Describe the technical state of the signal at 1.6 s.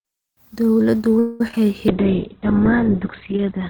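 Short concealed packet loss lies just before that moment: speech audio failed to reach the decoder in time at 1.48 to 1.51 s, 1.51 to 1.54 s and 1.56 s. The receiver bridged each gap by extending the preceding sound, heard as a brief smear or wobble.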